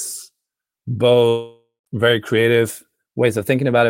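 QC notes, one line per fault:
1.28–1.87 s, long network dropout: The speech breaks off and roughly 580 ms of it never returns. The last sound is stretched into a buzzy, hissy tail that fades away, then settles into about 130 ms of near silence before the audio resumes mid-flow with the gap simply missing. This is likely a stall in packet arrival. The receiver's concealment keeps extending the final fragment until it has nothing plausible left to repeat, then falls quiet.
2.70 s to the end of the clip, drift correction step: Playback abruptly runs about 5.7% fast, and the pitch rises with it by roughly 97 cents, almost a full semitone. The shift stays in place through the close of the clip rather than drifting in gradually. This points to a clock-matching stage that likely changed its playback rate in one jump to drain or refill its buffer. Because speed and pitch move together, the speech sounds suddenly detuned and hurried.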